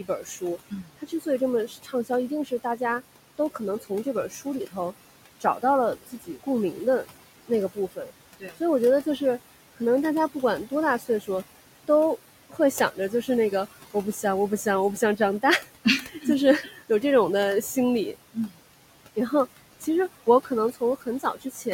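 Throughout the speech, the background sinks in the pauses and swells back under the talking. These are noise suppressor artifacts: the suppressor pulls down the bands it judges to be steady room noise, about 17 dB here, frame by frame, against room noise sitting about 16 dB below the speech.

From 0.04 to 2.81 s, 3.38 to 6.47 s, 7.04 to 9.21 s, 10.42 to 11.29 s, 11.88 to 17.03 s, 17.76 to 19.87 s and 20.44 to 21.66 s, soft consonants and word endings turn faint or swallowed, totalling up to around a second per stretch. This is speech cut by the noise suppressor, which mistook quiet speech for noise and lowered it by up to about 19 dB.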